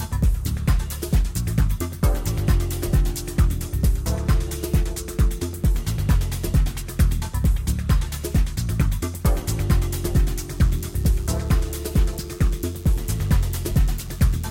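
From 10.57 s to the end at 14.51 s, a DECT cordless phone buzz appears: short radio bursts every 10 ms rectified into a thin 100 Hz buzz, roughly 30 dB below the signal.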